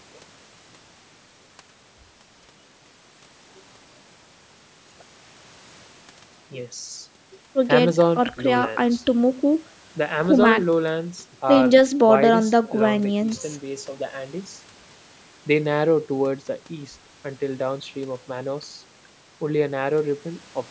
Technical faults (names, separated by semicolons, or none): none